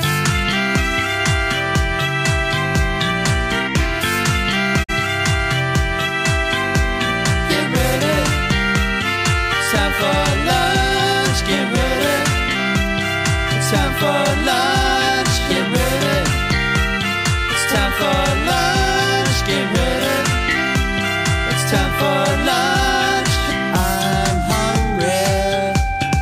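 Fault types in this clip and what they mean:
digital broadcast dropout: The receiver lost the signal or a frame failed its checksum, so it muted its output until good frames arrived again. The sound fades out over about 20 ms at 4.82 s and is back by 4.94 s, leaving one short hole. About 43 ms of programme never reaches the listener, which fits a single lost frame, and the sound resumes further along rather than where it broke off.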